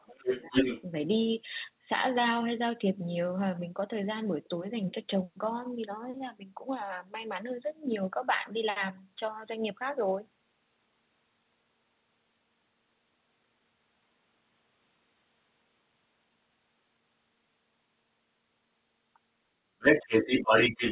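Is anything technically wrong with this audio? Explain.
Yes, two faults are audible, both at the start and one again at the end.

Speech suppressed in double talk occurs at 0.06 to 0.21 s and again at 0.46 to 0.53 s. The talker's level dips sharply, about 20 dB in the first spot and a milder 5 dB in the second. Both sides were likely talking at once, so the echo canceller turned everything down.

The other side's voice leaking through runs from 0.15 to 0.82 s and from 19.79 s to the end. A second voice sits about 5 dB above the talker. The echo canceller likely failed to strip the loudspeaker playback from the microphone. The sound is band-limited to 4 kHz, consistent with a narrowband call codec.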